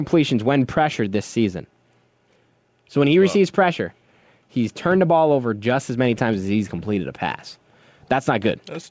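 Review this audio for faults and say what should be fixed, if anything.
The level pumps throughout the speech, with a gain swing of roughly 5 dB. Loud and quiet passages sit unnaturally close together, so the delivery sounds flattened. This is gain pumping, likely from the microphone gain being set far too high, so a fast limiter or compressor clamps down on each loud syllable and lets go in the gaps. The call path's band limit is audible too, with nothing above 8 kHz, which fits G.722 at 64 kbps. To prevent the pumping, lower the microphone input gain until the limiter no longer acts on normal speech peaks.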